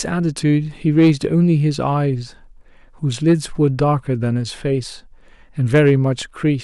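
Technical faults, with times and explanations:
0.98–1.25 s, 3.28–3.82 s and 5.74–5.95 s, hard clipping: in each of these three stretches the speech drove a stage of the chain past its maximum, about 3 dB over in the first and last and about 2 dB over in the middle one. The peaks are cut off flat, and the squared tops create harmonics high above the voice, heard as a gritty crackle on the loudest syllables.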